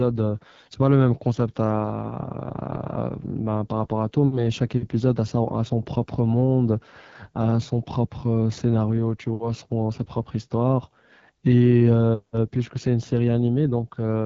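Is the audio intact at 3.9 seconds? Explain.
No. At 3.9 s the speech carries AMR wideband (HD Voice) codec damage, present across the whole clip. The codec models the voice with pulses through a vocal tract filter. The low rate, which fits about 8.85 kbit/s, makes it rough and raspy, with nothing above 7.6 kHz.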